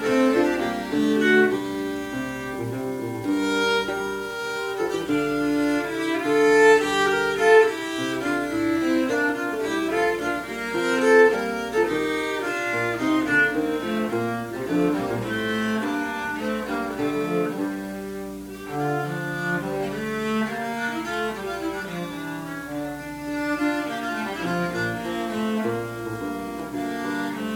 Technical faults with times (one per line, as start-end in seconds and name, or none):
none